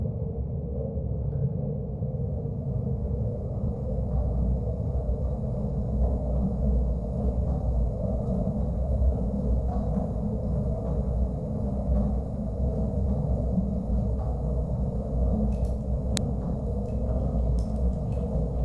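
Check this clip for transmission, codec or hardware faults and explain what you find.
One fault: a file header played as audio at 16.17 s. Header bytes left at a joined segment were decoded as samples, producing a sharp, loud click regardless of the surrounding sound.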